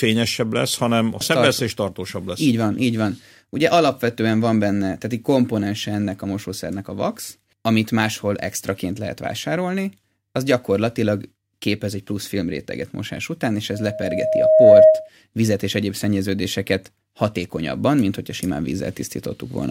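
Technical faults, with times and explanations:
13.73–15.09 s, loudspeaker feedback squeal: after "filmréteget mosás után és", a 629 Hz tone swells over about a second to roughly 15 dB above the speech, as the microphone-loudspeaker loop exceeds unity gain.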